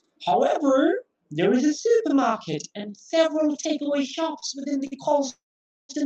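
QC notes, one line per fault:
Throughout: channel delay (doubling). One side runs about 40 ms late and folds into mono, so the speech gets a thick doubled, slapback edge.
4.39 s and 4.87 s: short stalls from a late packet. The sound is held for roughly 27 ms and 45 ms while the packet catches up, with nothing lost, just a brief buzzy hang.
5.30 to 5.91 s: call audio freeze. The last sound trails off as a fading buzz into about 0.5 s of silence, likely packets held up in transit. It then picks up where it left off, putting in a 0.6 s gap.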